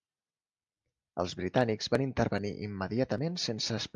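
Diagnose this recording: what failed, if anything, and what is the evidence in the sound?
No faults detected anywhere.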